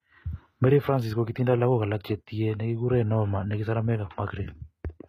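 Throughout the speech, s sounds turn gritty and metallic, likely from HE-AAC compression at a low bitrate near 20 kbps, with the treble copied up from lower bands. A spectrogram shows blocky, repeated high-band patches and nothing above 14.8 kHz.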